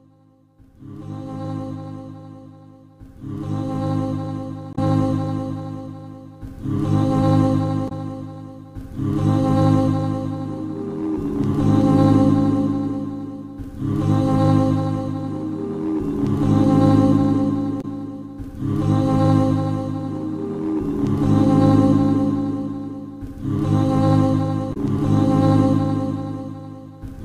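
Damaged data in the compressed stream has left the decoder misreading frames and losing sync, so the audio breaks into short glitches of about 70 ms at 4.72–4.78 s, 7.85–7.92 s, 17.78–17.85 s and 24.70–24.77 s.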